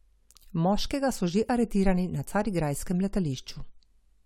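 No technical faults can be heard anywhere in the speech.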